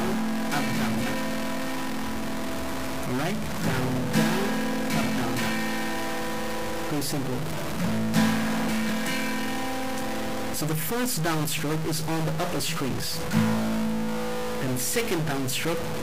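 Harsh, buzzy distortion runs through the whole clip, and the quiet gaps are filled with a steady noise rather than falling silent, which points to a stuck bit, likely a single bit in the converter or data line held at one value. Samples shift by a fixed step of about -25 dBFS wherever that bit should differ. Unlike bit-depth reduction, whose grain fades with the signal, this noise stays loud in pauses.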